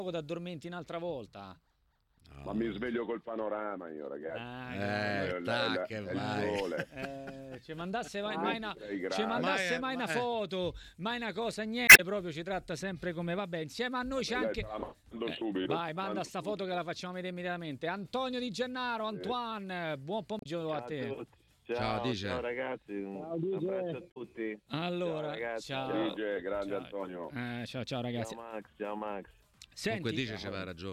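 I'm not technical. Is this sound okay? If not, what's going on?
No. There are three short glitches caused by damaged data in a compressed stream. They occur from 11.85 to 12.00 seconds, 20.39 to 20.46 seconds, and 24.08 to 24.17 seconds. Each lasts a tenth of a second or so and sounds like a brief chirp or blip. Part of the file's stored data was corrupted at those spots. The player couldn't read it properly and had to hunt for the next good chunk before continuing.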